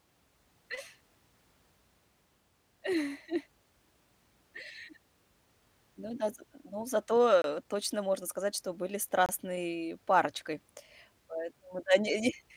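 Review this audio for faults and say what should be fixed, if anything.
The audio path likely twice failed to deliver a buffer in time, leaving a block of digital silence each time, at 7.42 to 7.44 s (23 ms, which fits a 1024-sample buffer), right after "да з ну зато" and before "э точно можно сказать", and at 9.26 to 9.29 s (27 ms), after "можно сказать что были". The speech drops straight to silence and returns with no fade, so each gap is a short hole. To prevent it, give the audio thread more buffer headroom or higher priority so output blocks are always filled before the deadline.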